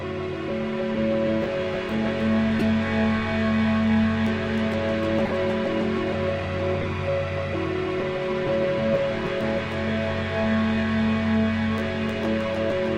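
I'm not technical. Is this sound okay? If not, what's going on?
No. There are three short glitches, at about 2.59 to 2.62 seconds, 5.25 to 5.33 seconds, and 6.81 to 6.86 seconds. Each is a corrupt frame decoded. The sound was stored in small compressed chunks called frames. A few of them got damaged, and the player used them anyway. The damaged data puts sound at the wrong pitches. The first glitch spans a couple of frames, the second about four, and the third about three.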